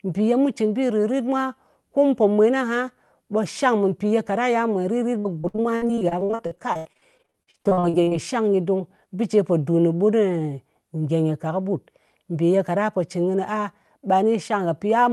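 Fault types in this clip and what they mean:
Repeated packet loss (robotic sound): Between about 5.19 and 8.13 s the call keeps dropping or delaying packets, and the receiver papers over each hole by stretching out the last bit of sound it had. The holes come thick and fast, dozens of them, the longest around 81 ms, so roughly a third of that stretch is patched-in filler. You hear it as choppy, robot-like speech with chunks missing.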